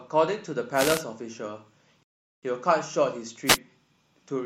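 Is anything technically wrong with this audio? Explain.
Yes. Two kinds of fault affect this speech. The first is a wireless microphone noise hit, at 0.74 to 1.03 s and again at 3.46 to 3.58 s. The analogue FM radio link from the microphone faded as reflected signals cancelled the direct one, so the receiver's own noise rose through the audio. Each hit is a brief swish or burst of static over the voice. The first lasts about 0.3 s and the second about 0.12 s.

The second is a rebuffering stall at 2.03 to 2.43 s. The player emptied its store of downloaded audio and had to wait for more data before continuing. The speech drops to silence for about 0.40 s, then picks up exactly where it broke off. Nothing is skipped, but the pause stretches the clip by that much.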